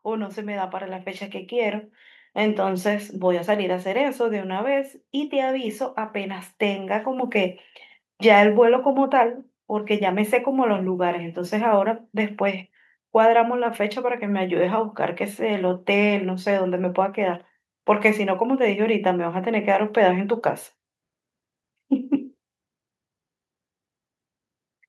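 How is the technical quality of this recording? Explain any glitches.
The main glitch here is automatic gain rising at the start. From 0.05 s to about 7.34 s the level creeps up by roughly 12 dB. The automatic gain control decided the incoming signal was too quiet and kept nudging its gain higher over those seven seconds. Because it scales everything, the speech and the background noise swell together. You hear the room getting louder right along with the voice, a slow fade-up rather than a jump.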